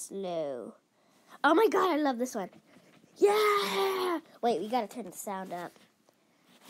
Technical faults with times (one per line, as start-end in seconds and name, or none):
none